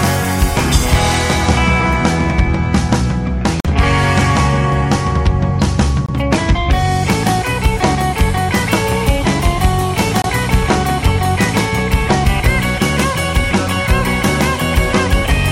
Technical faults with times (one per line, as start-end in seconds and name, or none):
3.60-3.67 Bluetooth dropout
6.06-6.09 Bluetooth dropout
10.22-10.25 Bluetooth dropout